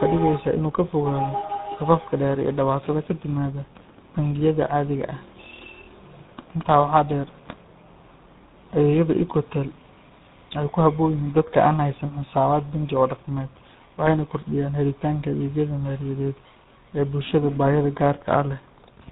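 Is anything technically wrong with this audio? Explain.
Yes. Throughout the speech there is tandem speech coding. The call was decoded and re-encoded through G.726 at 24 kbit/s, G.711 A-law, then GSM full rate, so GSM works on ADPCM damage and stacks its own on top. The result is gritty, warbly and muffled, with nothing above 3.8 kHz. The roughness and warble go beyond what GSM alone would produce, which separates this from simple band-limiting or a single low-bitrate codec.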